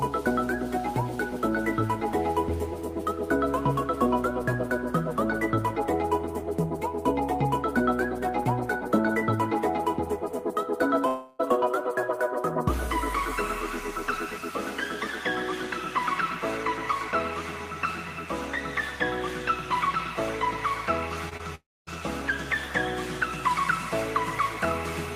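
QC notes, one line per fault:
11.07–11.41 s, long network dropout: About 0.32 s of audio is missing, and the whole gap is papered over by the receiver extending the last sound rather than leaving a hole, so no silence appears. The result is a smeared, buzzy continuation that fades before the real audio resumes further on, with that stretch lost, most likely from a stall in the network path. On a spectrogram the harmonics flatten into repeated, blurred bands that dim toward 11.41 s. The waveform shows a looped, decaying envelope instead of normal variation.
21.29–21.41 s, short concealed packet loss (two events, 21.29 s and 21.37 s): Two 20 ms pieces fail to reach the decoder in time, and each is bridged by the receiver continuing the preceding sound and then cross-fading into the real signal. Heard together they give a quick flutter or brief smear. Any brief transient inside either slot can disappear. 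A spectrogram shows two narrow columns where detail is smoothed or copied, and the waveform shows short, slightly too-regular cycles at each spot.
21.55–21.89 s, long network dropout: Again about 0.32 s fails to arrive, coming just after the two short losses, which points to a likely bout of network congestion. The concealment carries the last sound for only a brief moment before fading, and the remaining roughly 0.23 s is silence until the audio returns further on without the lost part. On the spectrogram a short smeared band is followed by a blank gap. The waveform shows a quick decaying tail and then a flat line.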